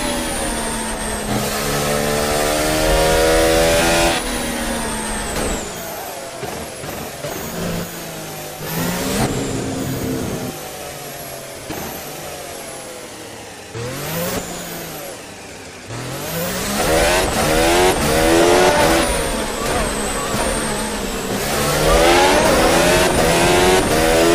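From 0.62 s to 23.89 s there's a steady tick every 0.67 s, around forty of them. That regular spacing points to clock drift buffer slips: two devices' clocks likely differ by a few hundred ppm, so the buffer keeps dropping or repeating a handful of samples.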